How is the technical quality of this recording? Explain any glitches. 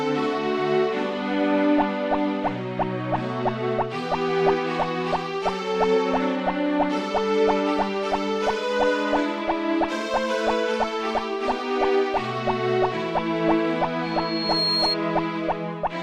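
There is one clear glitch, near the end. From 14.04 to 14.97 s a piercing tone at 4.3 kHz swells over about half a second to roughly the level of the surrounding sound, then stops. This is loudspeaker feedback squeal: a microphone picked up its own loudspeaker, and at that frequency the loop gain exceeded one, so the tone fed on itself.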